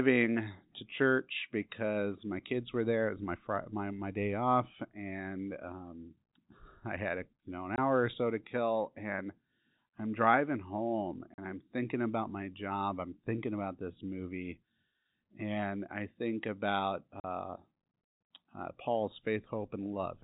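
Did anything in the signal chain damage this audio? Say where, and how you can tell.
Yes. Silent holes with hard edges at 7.76–7.78, 11.34–11.38 and 17.20–17.24 s, after "i'm driving home" in the second, point to network packet loss filled with silence; the gaps fit 20 ms packets.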